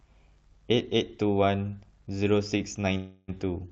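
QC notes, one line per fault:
2.57–2.61 s, short stall from a late packet: the speech briefly hangs on the current sound, held about 20 ms longer than it should be, with a faint buzzy smear before it picks up exactly where it left off. A packet arrived late, the jitter buffer ran dry, and the receiver stretched the last sound to bridge the wait. Nothing is lost, but everything after this point runs about 20 ms later.
2.97–3.30 s, call audio freeze: the speech stops moving forward and the last sound is drawn out as a fading buzz for roughly 0.3 s. It never drops to true silence, and it resumes from the same place with nothing skipped. The likely cause is a burst of packets held up in transit, which emptied the jitter buffer. The receiver filled the 307 ms gap with synthesized continuation, pushing the rest of the audio later by that amount.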